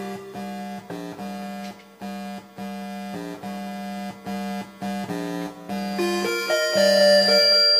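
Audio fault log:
5.78 to 7.79 s, loudspeaker feedback squeal. A steady 4.8 kHz tone swells over about a second and a half, ending up roughly 10 dB above the sound. The microphone is picking up its own loudspeaker, and the loop gain exceeds one at that frequency.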